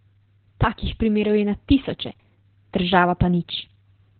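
From start to finish the speech carries heavy Opus voice compression, and it sounds like the low-rate SILK voice mode. Nothing survives above about 4.3 kHz, so the band has been squeezed down to narrowband and everything comes out muffled and boxy. The excitation is coded so coarsely that voices turn hoarse and a bit robotic, the kind of damage that points to a bitrate somewhere around 8 kbps.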